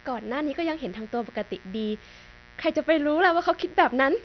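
A mains buzz runs through the whole speech recording, sitting roughly 25 dB below the voice. Its spikes fall twice per 60 Hz cycle, so harmonics climb well into the kilohertz range, giving a raspy edge rather than the smooth, pure tone of a plain hum.

Throughout, the audio is dull and nothing survives above 6.1 kHz, with a heavy gurgling, granular grain on the voice. The likely cause is MP2 compression at a starved rate, which fits about 48 kbps, where upper sub-bands are switched off and the rest coarsely quantised. The flickering bands and grit set it apart from a simple low-pass filter.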